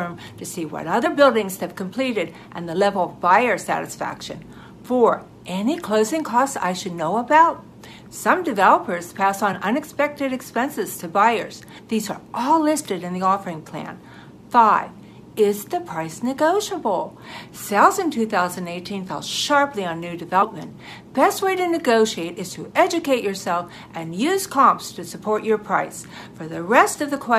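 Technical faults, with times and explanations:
1.05–1.07 s, 9.52–9.55 s, 11.77–11.79 s and 20.41 s, compressed frames skipped: the decoder dropped whole frames, so the sound leaps ahead by roughly 20, 20, 50 and 100 ms. The waveform shows an abrupt shape change, and the spectrogram a brief vertical smudge where patterns break.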